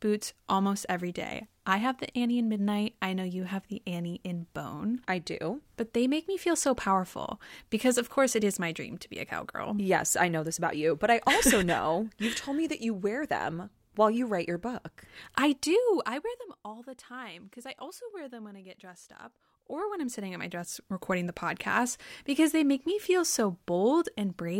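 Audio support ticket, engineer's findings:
Zipper noise, 15.45–16.54 s: fast ticking riding on the speech while level drops by roughly 15 dB. Gain stage applying steps without smoothing, around a hundred a second, each step a small click. Zipper noise, 19.48–21.05 s: same ticking as level climbs back roughly 15 dB. Here the buzz tracks only the moving gain.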